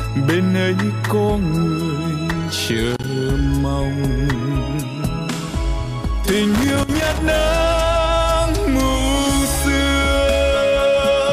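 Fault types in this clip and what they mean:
Loose connector crackle: a worn or dirty contact somewhere in the chain keeps making and breaking, so the signal is chopped into ragged fragments. It appears as a short burst of scratching from 2.90 to 3.04 s and a longer one from 6.54 to 7.18 s. Unlike a single digital click or a clean dropout, each burst is an uneven cluster of crackles with no regular spacing.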